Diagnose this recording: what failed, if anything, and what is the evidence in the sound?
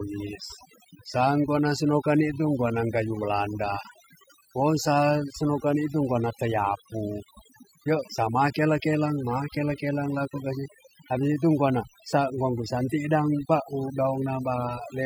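Overdone noise removal, at the call-processing stage, runs through the whole speech clip. The background drops and breaks up into twinkling specks. An over-aggressive suppressor is gating individual frequency bands whenever they approach its noise estimate, and quiet voice components go with them. A spectrogram shows scattered isolated dots in the gaps and patchy, holed harmonics.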